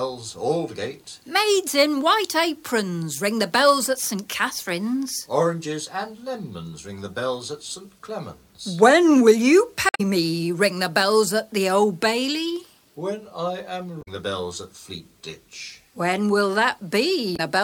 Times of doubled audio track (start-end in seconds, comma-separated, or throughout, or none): none